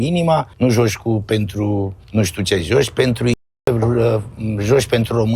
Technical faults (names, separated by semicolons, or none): audio dropout to silence